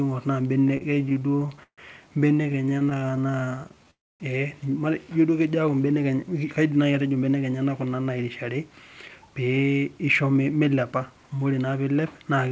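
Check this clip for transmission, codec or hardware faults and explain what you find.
Yes, there are three kinds of fault: stuttering, a brief freeze and a rushed stretch. The speech is also band-limited, with nothing above 8 kHz, which fits the G.722 call codec's normal behaviour.

The repeated stalls (stutter) run from 0.68 to 1.80 s and again from 2.38 to 3.85 s. The speech drags and hiccups, with held fragments of sound breaking its flow. Packets arrived late or too slowly, so the jitter buffer kept running dry and the receiver stretched the last sound to cover each wait. In the first span the pauses are longer, up to 0.14 s, and cover about 28% of it. In the second they are many short ones of up to 15 ms, covering 18%.

The call audio freeze comes right after, from 3.91 to 4.22 s. The sound hangs for about 0.29 s, and most of that, 0.24 s, is silence. The likely cause is packets held up in transit, which emptied the jitter buffer. 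The receiver briefly continued the last sound, let it fade out, then resumed where it had stopped, so nothing is lost.

The jitter buffer speed-up runs from 6.71 to 11.75 s. The speech sounds hurried, about 9% fast, but keeps its pitch. The buffer had built up more delay than it aims for, so the receiver trimmed many tiny pitch-period slices to catch up, removing roughly half a second in all.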